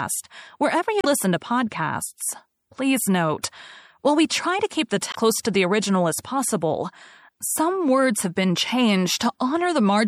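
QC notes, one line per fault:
Throughout: MP3 compression, plainly audible. Treble is cut off and weak detail swirls in and out, which fits a low bitrate around 64 kbps, likely the cause.
1.01–1.06 s and 5.11–5.16 s: damaged data in a compressed stream. Each spot gives a brief glitch. The decoder loses sync on bad frames and skips ahead to the next one.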